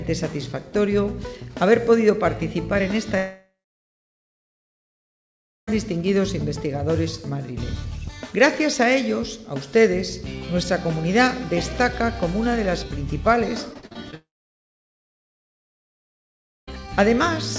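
From 3.18 to 5.69 s the sound cuts out. A brief fading buzz carries on, then about 2.1 s of near silence, and it resumes with that stretch simply gone. That's most likely a long network dropout, with the receiver padding the hole.

At 13.73 s you get repeated packet loss (robotic sound): five short gaps up to 40 ms each, about a third of the span patched over, so it turns choppy. It runs straight into a second long network dropout from 14.14 to 16.74 s, probably again, with roughly 2.4 s of silence. The band tops out at 8 kHz, which fits a G.722 call path at 64 kbps.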